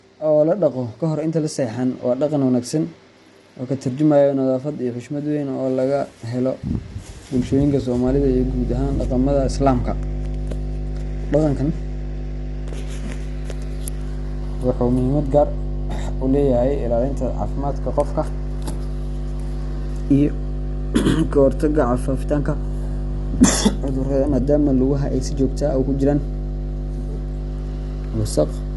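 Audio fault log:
throughout: low-delay AAC compression. A short-frame codec like AAC-ELD, likely run at a low bitrate, near 32 kbps, resolves the speech harmonics coarsely, so the voice sounds rough and grainy, with noise filling gaps between harmonics and nothing above 11.5 kHz.
8.07–28.76 s: mains hum. The power line leaks into the signal path through a ground loop or a nearby transformer, adding a steady 50 Hz tone with low harmonics that sits only slightly below the speech and continues to the end.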